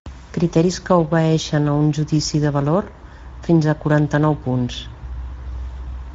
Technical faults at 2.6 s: Speex codec

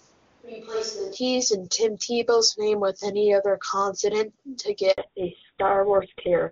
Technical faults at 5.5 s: fallback to narrowband

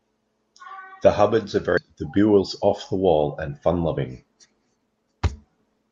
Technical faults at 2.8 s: jitter buffer speed-up

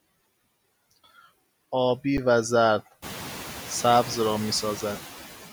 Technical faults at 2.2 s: noise suppressor artifacts; underrun with held sample

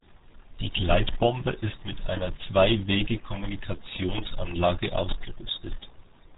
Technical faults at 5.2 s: RealAudio 14.4 codec

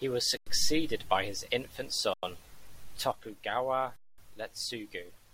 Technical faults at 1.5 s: none

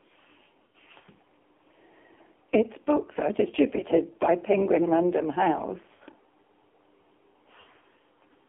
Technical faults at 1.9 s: AMR narrowband mobile codec

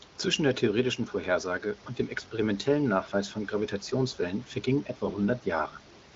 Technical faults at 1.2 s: none

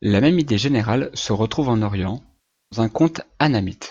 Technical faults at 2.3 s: AAC frame loss with concealment

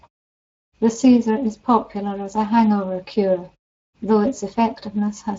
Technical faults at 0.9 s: Speex codec

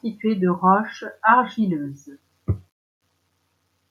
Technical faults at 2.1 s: none

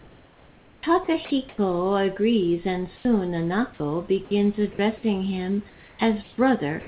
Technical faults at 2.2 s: none

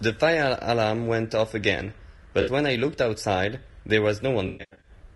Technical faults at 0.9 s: low-delay AAC compression

